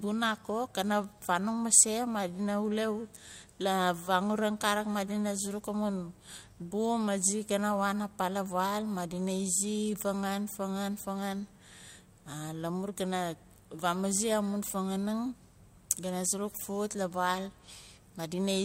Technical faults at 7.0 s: none

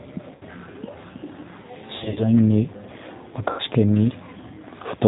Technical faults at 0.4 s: G.729 codec; VoIP packet loss concealed by the speech codec

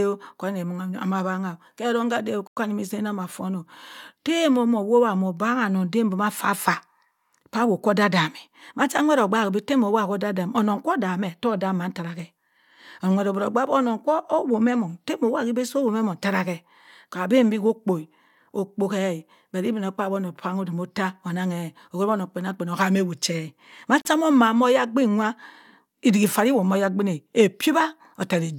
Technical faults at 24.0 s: Bluetooth stall

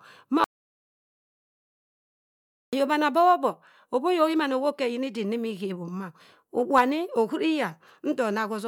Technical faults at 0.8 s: audio dropout to silence

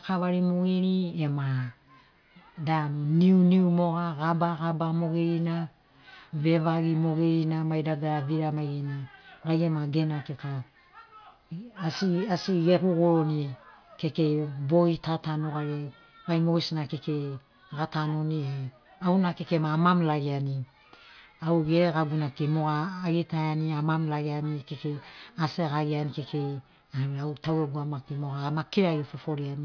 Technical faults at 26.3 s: none

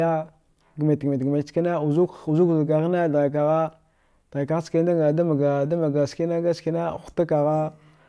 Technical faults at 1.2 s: none

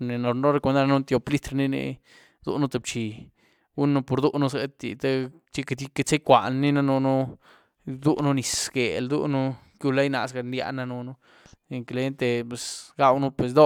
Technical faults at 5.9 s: none

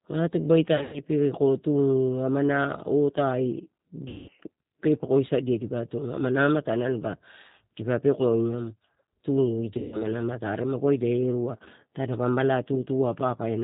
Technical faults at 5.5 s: G.729 codec

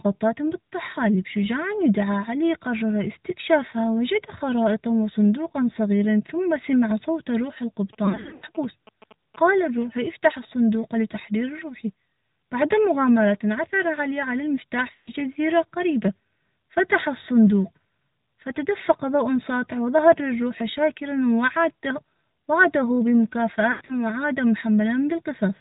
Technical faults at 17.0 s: AMR narrowband mobile codec

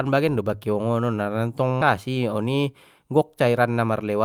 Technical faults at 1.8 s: skip ahead

